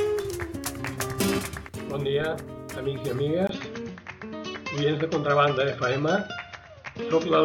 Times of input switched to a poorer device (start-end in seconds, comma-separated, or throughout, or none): 3.47-7.45